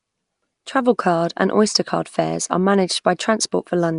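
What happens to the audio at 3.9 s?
At 3.9 s the speech carries the same rough, hissy halo and smeared, underwater quality heard across the whole clip. This is likely Nellymoser compression, consistent with roughly 44 kbps, where weakly coded bands are replaced by noise.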